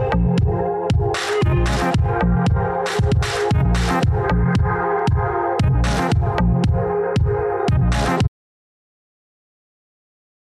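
The audio runs fine up to 8.28 s, then there's an audio dropout to silence that lasts right through to the end, about 2.3 s of dead air with no room tone at all. That's likely the input getting lost, through a disconnect, failed link or stray mute, while recording kept going.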